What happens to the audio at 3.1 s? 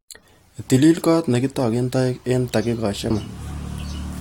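At 3.09 s the speech breaks into a very short digital blip. This is damaged data in a compressed stream. Data there is corrupt, so the decoder misreads that frame, loses sync, and jumps to the next valid frame header.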